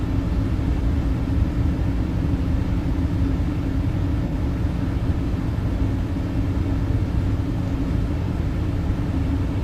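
An AAC frame loss with concealment occurs from 4.28 to 4.33 s. A gap of about 43 ms went missing from the decoded stream, which fits a single lost AAC frame. The decoder did not leave silence; it filled the hole by reusing the last good spectrum with altered phase and energy. The result is a brief smeared patch in the audio at that point, where the sound loses definition for a moment before the stream resumes cleanly.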